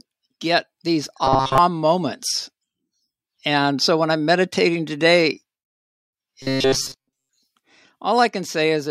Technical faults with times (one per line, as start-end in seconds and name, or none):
1.24-1.58 robotic sound from repeated short buffers
6.42-7.38 robotic sound from repeated short buffers